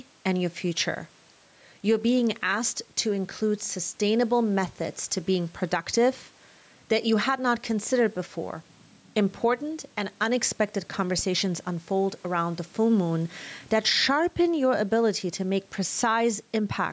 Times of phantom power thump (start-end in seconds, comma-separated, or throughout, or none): 11.19-11.66